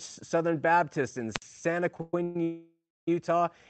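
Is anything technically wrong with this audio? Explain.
Yes, there are three separate faults in this speech clip, heard through a call path whose high end stops at about 8 kHz.

From 1.33 to 1.43 s there is a wireless microphone squelch dropout. The transmitter's radio signal weakened until the receiver's squelch shut the output, so hiss briefly rises, then about 61 ms of near silence, then the sound comes back. This is a true hole rather than a smoothed-over stretch, and the burst of static at its edge separates it from the network faults that come later.

Between 1.94 and 2.36 s the audio stutters. These are repeated stalls: packets kept arriving late, and four times the jitter buffer ran dry, each time filling the wait by stretching out the last sound. The fill totals 268 ms, the longest single stall is 122 ms, and nearly two thirds of that stretch is padding. Nothing is lost, but the audio drags in short hiccups instead of a single long pause.

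From 2.43 to 3.08 s there is a call audio freeze, likely caused by packets being held up in transit. The sound hangs on and fades, then falls into about 290 ms of silence, with 642 ms filled in all. The audio then picks up exactly where it left off, so the clip is delayed but nothing is skipped. Unlike the stutter, this is one long stall. Unlike the squelch dropout, it fades out of the held sound rather than bursting into hiss.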